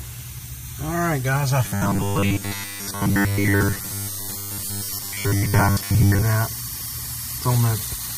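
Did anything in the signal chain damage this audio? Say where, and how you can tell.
Yes, at the driver or buffer stage: from 1.64 s to 6.25 s the sound collapses into a rigid metallic buzz pitched at 100 Hz, robotic sound from repeated short buffers. The likely cause is audio arriving too seldom, so the software repeats the last 10 ms block, imposing a fixed 100 Hz buzz, while most of the real audio is skipped. Unlike plain dropouts, there are no silent gaps; the stretch is filled with a steady, pitched buzz.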